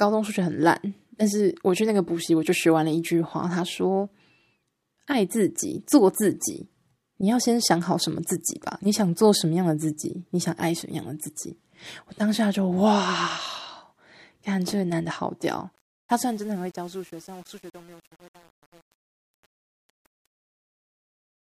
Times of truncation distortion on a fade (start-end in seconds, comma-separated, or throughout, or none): 15.76-21.57